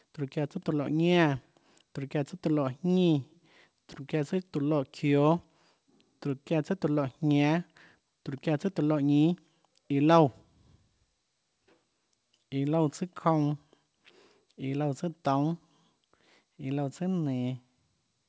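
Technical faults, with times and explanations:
No technical faults are audible.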